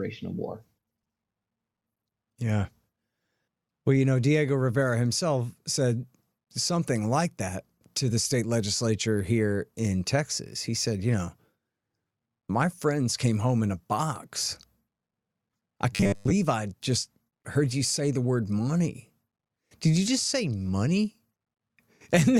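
From 15.92 to 16.32 s, just before "I just heard you", robotic sound from repeated short buffers: a rigid 100 Hz metallic buzz, likely from a 10 ms chunk looping while most real audio was skipped.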